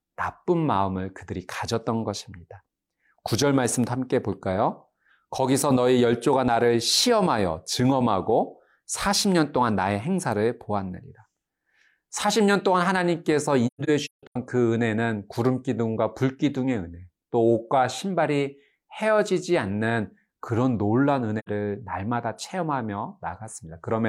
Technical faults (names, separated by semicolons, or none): AAC frame loss with muting